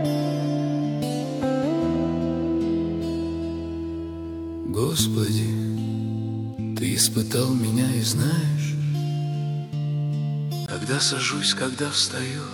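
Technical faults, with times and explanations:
10.66–12.54 s, input switched to a poorer device: recording likely moved to a lesser input. After a 20 ms gap the sound turns about 5 dB quieter, with nothing above 11.4 kHz and fresh background noise.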